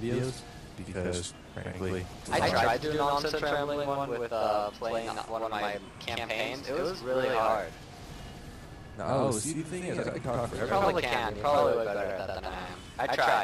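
One channel runs late by about 93 ms for the whole clip, a delay that fits a 4096-sample buffer, and the two channels are then summed to mono. This channel delay causes doubling: the late copy doesn't fuse with the original but arrives as a distinct second hit at the same level. Every onset in the audio is followed by a single slap echo, giving the sound a stuttering, doubled quality throughout.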